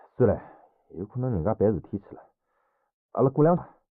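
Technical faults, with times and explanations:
3.54–3.58 s, damaged data in a compressed stream: a short glitch lasting about 40 ms, where corrupted bytes in the encoded stream caused the decoder to misread those frames and lose sync until it found the next valid frame header.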